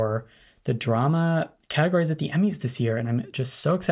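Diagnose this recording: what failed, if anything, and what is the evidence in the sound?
Nothing failed here, and the sound gives no evidence of a fault at any stage.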